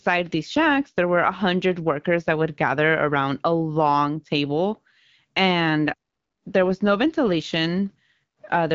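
No technical faults can be heard in the speech, which comes through the AMR wideband (HD Voice) codec at 12.65 kbit/s with only the light coding traces expected at that rate.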